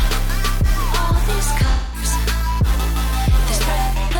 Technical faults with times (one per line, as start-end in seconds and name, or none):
1.71-2.04 AAC frame loss with concealment